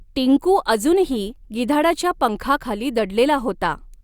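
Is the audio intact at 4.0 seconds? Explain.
Yes, at 4.0 seconds the speech runs cleanly, with no dropout, click, distortion or other fault at that point.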